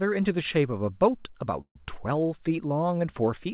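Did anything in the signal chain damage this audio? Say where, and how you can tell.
Yes. A call audio freeze at 1.61 to 1.76 s sits at the network and jitter-buffer stage: the sound stalls into a fading fill that drops to silence for about 90 ms, then resumes intact, which points to a likely packet delay inserting roughly 140 ms.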